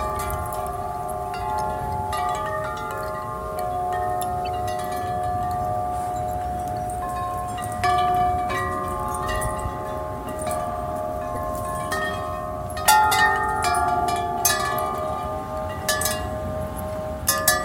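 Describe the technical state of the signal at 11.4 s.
A corrupt frame decoded, from 11.35 to 11.37 s. Damaged bits in a couple of frames misplace energy, giving a brief chirp, squeak, blip or burst of noise peaking around -20 dBFS.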